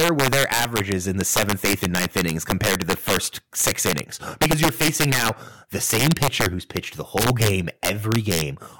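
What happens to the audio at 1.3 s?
At 1.3 s you're hearing integer overflow, which runs through the whole clip. The speech is pushed about 12 dB too hot, so the loudest peaks, around one percent of samples, wrap to the opposite sign instead of clipping, giving harsh, violent cracks.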